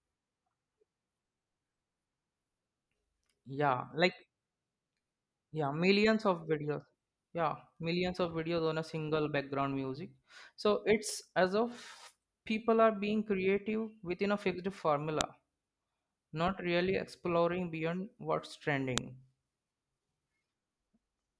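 At 15.21 s and again at 18.98 s the speech is broken by a sharp, loud click, a file header played as audio. Separate WAV pieces were joined without stripping their headers, so those header bytes are reproduced as samples, snapping regardless of the surrounding signal.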